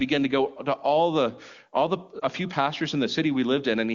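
A lost AMR speech frame at 2.20 to 2.24 s, between "all the all the" and "few pastors in", failed its checksum. The AMR wideband decoder replayed the previous pitch and vocal tract settings at reduced gain, giving a brief dip or warble that fits one missing 20 ms frame.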